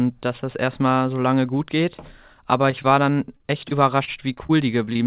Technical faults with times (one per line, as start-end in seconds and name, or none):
2.71-2.89 short stall from a late packet
2.82-2.86 short concealed packet loss
3.37-5.01 repeated packet loss (robotic sound)